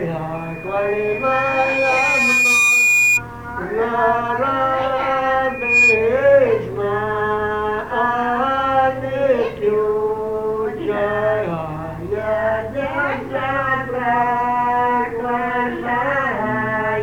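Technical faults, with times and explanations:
0.34 to 3.22 s, loudspeaker feedback squeal: a tone at 2.4 kHz creeps up over roughly two seconds until it sits a few dB above the rest of the sound. The microphone is hearing its own loudspeaker, and at that one frequency the loop gain tops unity, so the tone keeps feeding itself.
5.49 to 6.19 s, loudspeaker feedback squeal: the same 2.4 kHz ring comes back, this time surging in a fraction of a second to around 10 dB over the sound.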